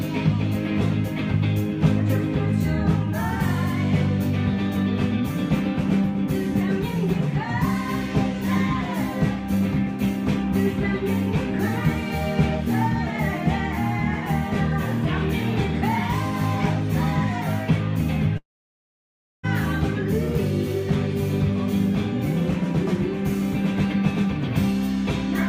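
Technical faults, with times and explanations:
18.37 to 19.45 s, long network dropout: the audio breaks off at 18.37 s. The last sound is stretched into a short fading tail, and then about 0.99 s of silence follows. Playback resumes at 19.45 s without the missing 1.06 s of material. The likely cause is packets ceasing to arrive. The receiver briefly extended what it last had, then muted until the stream came back, so the lost audio was skipped rather than delayed.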